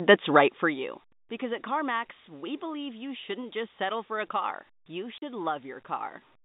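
Packet loss filled with silence at 5.18 to 5.22 s: a 40 ms stretch of the speech never arrived, which fits two 20 ms packets, and the receiver put silence in its place. The result is an abrupt hole with hard edges.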